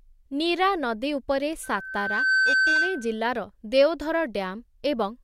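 A speech clip with loudspeaker feedback squeal from 1.63 to 3.21 s: a 1.5 kHz tone swells over roughly 0.7 s and settles a few decibels above the voice. The spectrogram shows one bright horizontal line; the waveform's envelope grows steadily.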